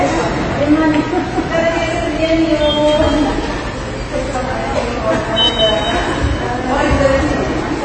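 AAC compression, likely the cause, is audible throughout: nothing reaches above 8.5 kHz, and plainly audible codec damage leaves the audio dull and smeared. The encoder has lowered its cut-off and starved the remaining bands, which fits AAC-LC at a low bitrate around 24 kbps.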